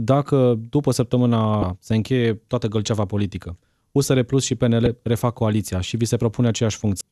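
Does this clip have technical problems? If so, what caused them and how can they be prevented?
Yes. There are three short bursts of damaged data in a compressed stream, at 1.60 to 1.63 s, 4.84 to 4.87 s and 6.98 to 7.01 s, each heard as a brief glitch in the speech. Some of the compressed bytes there were lost or corrupted, so the decoder misread those frames, lost sync and hunted for the next valid frame header before playing on. To prevent it, carry the stream over a reliable transport, or add checksums and error protection so bad frames are caught and concealed.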